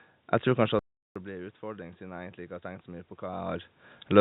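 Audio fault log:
0.69–4.2 s: automatic gain rising. The input dropped by about 17 dB, so the gain control slowly lifted its level. Speech and room noise swell together.
0.79–1.16 s: playback stall. The sound stops dead for 365 ms, then resumes. The player likely ran short of data or was blocked.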